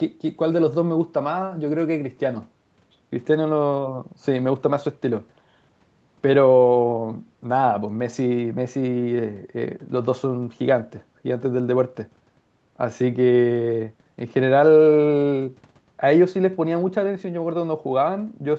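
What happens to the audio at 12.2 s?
Nothing goes wrong at 12.2 s: the speech carries on intact, with only the normal band limiting of call microphone processing, which trims the lowest bass and leaves nothing above 8 kHz.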